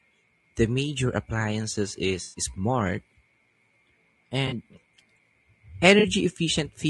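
Throughout, the speech sounds rough and grainy. This is likely low-delay AAC compression, AAC-ELD, at a low bitrate near 32 kbps. Its short frames blur pitch harmonics.

AAC frame loss with concealment occurs at 2.23 to 2.41 s, 4.47 to 4.53 s, and 5.99 to 6.05 s. Missing audio is patched from earlier spectrum, giving brief smeared, noisy gaps.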